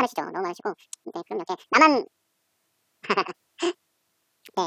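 From start to finish the speech is read two samples at a time, a double-speed fault in which each pair of samples is taken as a single frame. Playback runs twice as fast and a full 12 semitones higher.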